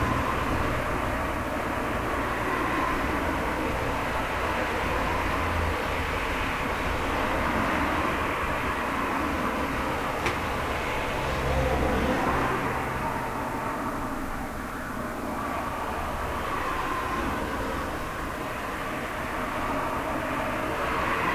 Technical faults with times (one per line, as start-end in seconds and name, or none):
none